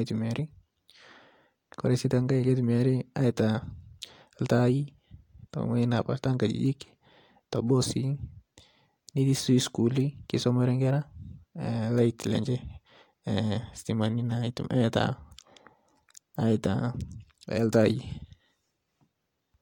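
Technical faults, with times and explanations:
No technical faults can be heard in this recording.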